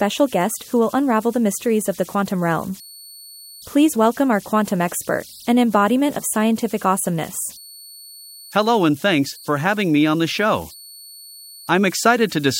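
A steady whistle near 4 kHz runs through the whole recording, heard in the pauses and turning into a grainy hiss beneath the quieter stretches of speech, sitting about 24 dB below the speech itself. These are converter idle tones: an undithered delta-sigma converter, fed a very small input, settles into repeating bit patterns, and those cycles produce a tone whose pitch follows the input's offset rather than the speech.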